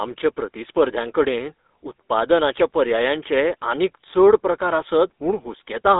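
Speech passed through the GSM full-rate codec for its whole length, and the damage is plainly audible. The codec rebuilds the voice from a vocal-tract model fed by a sparse, regularly spaced pulse excitation, consistent with the 13 kbps full-rate scheme. The band runs from roughly 250 Hz to 3.7 kHz, with nothing above 3.8 kHz, so the sound is thin and muffled.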